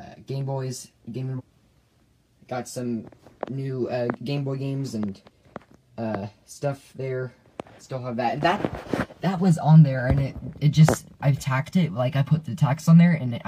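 At about 1.35 to 1.41 s the audio jumps abruptly ahead with a small blip, likely a stream segment skipped, so a piece of the programme just vanishes.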